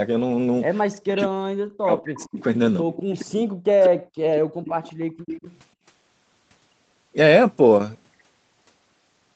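From 1.0 to 2.38 s the talker gets pushed down hard, by as much as about 40 dB, for roughly a second in total. That's speech suppressed in double talk: it sounds like the far side was talking at the same moment, and the echo canceller, likely unable to tell its own talker from the loudspeaker echo, ducked everything. The voice dips and breaks into pieces. The same thing happens again from 2.84 to 3.94 s, covering about 0.7 s.

Overlapping that first stretch, from 2.0 to 2.43 s, there's echo leak. A faint copy of the far side, about 25 dB down, comes back 188 ms late, likely because the canceller on a speakerphone didn't scrub out everything its microphone heard. Short scraps of that copy show up at 2.95 s and 3.84 s, about 20 and 15 dB down. Then a longer run, from 4.36 to 5.58 s, sits about 15 dB under the speech with the same 188 ms lag.

During that longer run, the room sound itself gets chopped. 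That's background gated by the echo canceller. While the loudspeaker was playing, the canceller clamped the microphone. The background drops out from 4.38 to 4.64 s, about 37 dB at its deepest, and again from 4.98 to 5.26 s, about 40 dB. Each time it snaps back once the canceller lets go. The call's microphone processing tops out at 8 kHz, which is normal for it.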